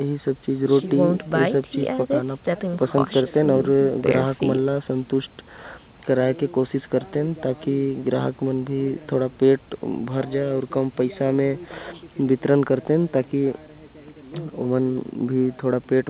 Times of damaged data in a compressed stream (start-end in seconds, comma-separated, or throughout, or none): none